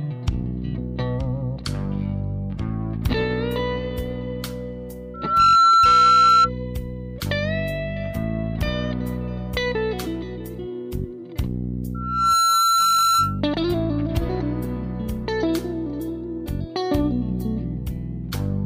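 Loudspeaker feedback squeal appears at 5.14–6.50 s and again at 11.94–13.41 s: a 1.4 kHz tone swells within half a second to roughly 10 dB above the audio as the mic-to-speaker loop exceeds unity gain, showing as a bright horizontal line on a spectrogram and a ballooning waveform envelope.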